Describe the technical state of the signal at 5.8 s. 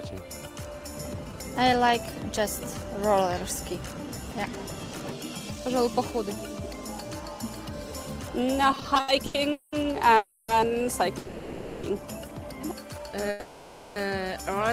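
At 5.8 s the signal is intact, with no dropout, distortion, glitch or other technical fault to be heard at that moment.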